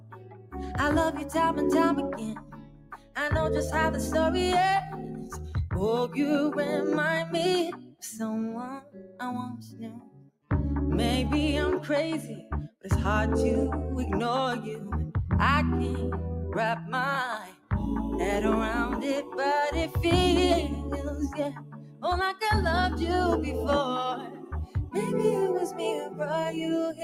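Noise suppressor applied to music or sounds runs through the whole clip. A speech-oriented suppressor treats sustained tones and ambience as noise, so its gain swings by roughly 15 dB. Onsets punch through while held material sinks, and the sound pumps and thins.

Sound cut by the noise suppressor appears at 0.00–3.16 s, 4.87–6.17 s, 7.72–10.51 s, 12.35–12.87 s, 16.79–17.72 s, 19.23–22.42 s and 24.14 s to the end. The suppressor clamps steady passages and decays, dropping them by about 16 dB at worst, and by about 9 dB in the 4.87 s stretch. Within each span up to 22.42 s, somewhere between a fraction of a second and a second and a half is pulled down, so tails vanish early.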